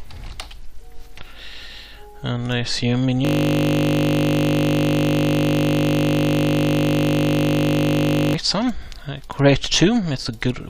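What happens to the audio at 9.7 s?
Nothing goes wrong at 9.7 s: the audio plays through that moment intact, with no dropout, click or other audible fault.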